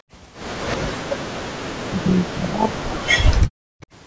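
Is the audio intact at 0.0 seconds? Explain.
No. Background gating by the echo canceller affects the opening. From 0.02 to 0.07 s, the canceller clamps the microphone down by about 40 dB while the loudspeaker plays. The room sound briefly drops out, then returns when the canceller releases.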